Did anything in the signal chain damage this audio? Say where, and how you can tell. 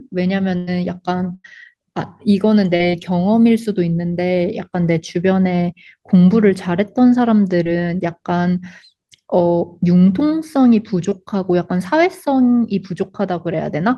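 Yes. The network stage shows two bursts of packet loss, at 0.57–0.69 s and 1.35–1.46 s. About 100 ms is missing in each. The receiver stretched the last sound for about 90 ms and faded it, giving a held buzz or dying hiss before the audio resumes further on.

Shorter gaps show up as short concealed packet loss at 2.76–2.81 s, 7.63–7.67 s and 11.09–11.13 s, each 20 to 40 ms late or lost. The decoder extrapolated the preceding sound and blended back, leaving a brief smear or wobble where a short consonant can disappear.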